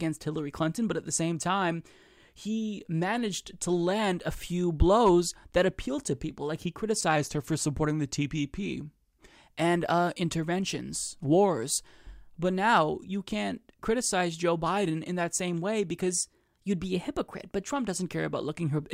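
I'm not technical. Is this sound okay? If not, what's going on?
No. From 7.16 to 9.34 s the speech slows about 5.6% and drops a semitone before "and uh interventions wars", and from 16.11 to 17.71 s, after "in that same way", it speeds up and rises by about the same. That's likely a drift correction step, where syncing software briefly nudges the playback rate.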